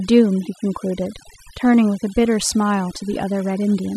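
It's a short speech clip, and it has overdone noise removal from start to finish. The denoiser was pushed too hard, so it kills individual frequency bands near the noise floor, taking soft parts of the voice too. You get near-silent gaps with little twinkly specks.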